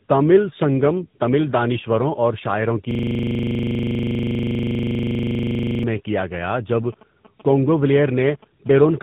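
Throughout the clip the speech carries tandem speech coding. It sounds rougher, more muffled and more warbly than a single narrowband link would leave it, and nothing is present above 3.8 kHz. That points to two low-rate speech codecs in series, probably a GSM full-rate leg followed by AMR-NB, with a G.711 transit hop between them. Each codec re-encodes the previous one's already damaged output, so their quantisation errors and spectral smearing add up.

From 2.91 s to 5.84 s a system hang loop takes over. The playback side stopped supplying new audio while the hardware kept cycling through its ring buffer, so one 40 ms slice repeats around seventy times. At a 25 Hz repeat rate this comes across as a coarse, rapid mechanical stutter, closer to a rattle than a steady tone. Normal audio resumes with "میں کیا گیا جب".

From 8.79 s to 8.98 s there is a GSM phone buzz. It is a hard, raspy buzz at 217 Hz with a dense harmonic series, sitting about 23 dB below the speech and unrelated to it. 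A nearby 2G handset transmitting its TDMA bursts was picked up and rectified by the audio circuitry. The buzz stays steady for its whole short duration, which is consistent with a phone in an active call rather than a data transfer.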